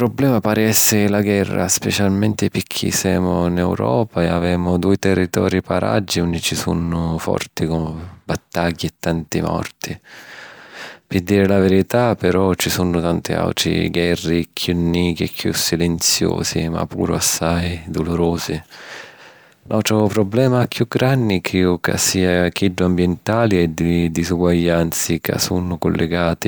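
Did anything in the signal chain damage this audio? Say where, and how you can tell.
No, no signal chain damage.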